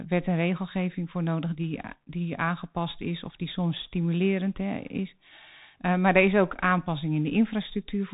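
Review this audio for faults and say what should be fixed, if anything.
The whole clip carries Bluetooth CVSD headset codec damage, and it is plainly audible. Nothing passes above 3.8 kHz. One bit per sample tracks the speech with an adapting step, which fits a 64 kbps link. Loud high sounds outrun that step and distort. S sounds turn scratchy over a granular hiss. Record with a wired or wideband microphone rather than a Bluetooth headset in its call profile.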